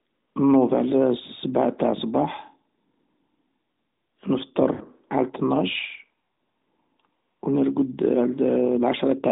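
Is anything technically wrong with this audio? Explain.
Yes. From 4.74 to 4.82 s, just before "على الطناش", the speech briefly smears into a stretched, buzzy tone that sags in level before the talker returns, sounding thin and rough for a moment. These are lost AMR speech frames. About 60 ms of audio failed to arrive intact, which fits a run of three lost frames. The decoder bridged the gap by repeating the last good pitch and vocal tract settings at falling gain, which produces that drawn-out fade within the narrowband mobile audio.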